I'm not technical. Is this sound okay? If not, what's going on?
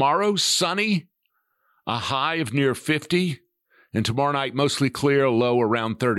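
Yes, this sound is okay, and there's nothing going on with it that needs fixing.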